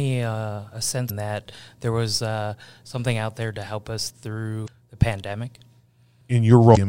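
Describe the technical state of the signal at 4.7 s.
A brief garbled blip cuts in from 4.64 to 4.68 s, right after "there to help us": damaged data in a compressed stream, where the decoder misreads corrupted frames and loses sync.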